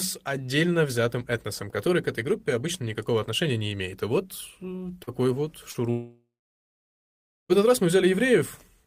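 At 5.03 s, just after "вот э", and again at 5.71 s, short concealed packet loss leaves brief smears where about 40 ms of audio was missing and extrapolated. From 5.90 s the sound trails into a fading buzz, then about 1.2 s of silence, resuming at 7.52 s with "этот раз". This is likely a long network dropout that lost about 1.6 s.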